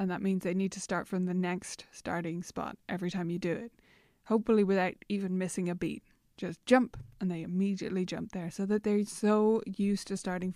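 No technical faults are audible anywhere in this speech.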